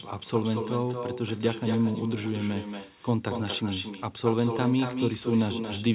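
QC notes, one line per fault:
Throughout: echo with no canceller. Every phrase of the speech is trailed by a second copy about a fifth of a second later, roughly 8 dB down, sounding thinner than the original. The far end is playing the call over a loudspeaker, its mic picks that up, and nothing subtracts it before it comes back across the network. Both copies stop at 4 kHz, which fits a narrowband G.711-style call path.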